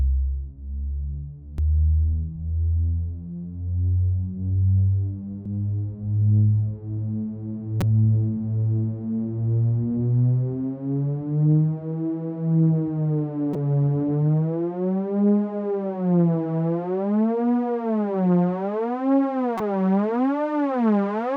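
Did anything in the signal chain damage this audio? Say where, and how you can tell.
Yes. Damaged data in the compressed stream, at the codec decoding stage: short glitches at 1.58 s, 5.46 s, 7.81 to 7.83 s, 13.53 to 13.56 s and 19.57 to 19.60 s. Corrupted frames make the decoder misread them or lose sync, producing brief blips.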